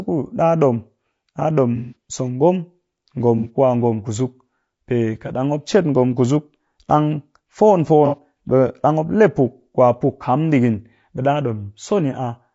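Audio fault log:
Throughout, low-delay AAC compression: the speech is rough and grainy, with noise filling the gaps between harmonics and a thin, synthetic top band. Short coding frames resolve pitch poorly. The damage is plainly audible and most likely comes from AAC-ELD at around 32 kbps.
1.76–1.95 s, 3.38–3.49 s and 8.06–8.17 s, AAC frame loss with concealment: the first patch is 150 ms long. The other two are about 60 ms each, just before "ku a ngom" and just after "ngom kusuk ɗang fon". Each sounds smeared and noisy because the decoder rebuilt the missing audio from the last good spectrum.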